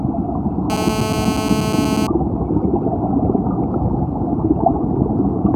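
From 0.70 to 2.07 s a GSM phone buzz sits about 6 dB below the sound: a nearby phone on a call bursts its transmitter about 217 times a second, and the audio circuitry rectifies those pulses. Unlike smooth 50 or 60 Hz mains hum, this buzz is harsh, raspy and steady.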